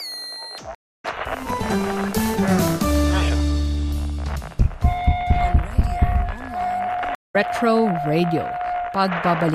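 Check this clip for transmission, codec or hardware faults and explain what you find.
Two stream reconnects break up the clip, at 0.75 to 1.05 s and at 7.15 to 7.36 s. Each time the connection dropped, the player fell silent, then reconnected and started a new decoder partway through the stream. The audio stops dead for 289 ms and then 192 ms, and picks up later than where it left off, skipping about a fifth of a second the first time and roughly 150 ms the second, so a short stretch of material is simply missing.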